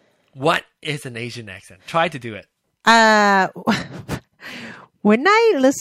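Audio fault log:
2.87–3.34 s, hard clipping: just after "to do it", the speech crackles on its peaks for about half a second. The signal here runs roughly 5 dB past what the chain can pass, so its peaks are sliced off flat rather than rounded. Those squared-off tops generate upper harmonics that were never in the voice, which the ear hears as that brittle distortion.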